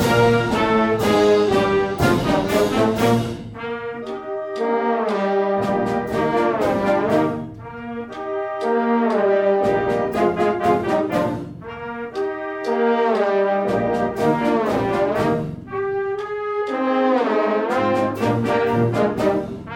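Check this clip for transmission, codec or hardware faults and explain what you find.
No transmission, codec or hardware faults turn up anywhere in the clip. Nothing in the audio points to trouble in the path that carried or recorded it.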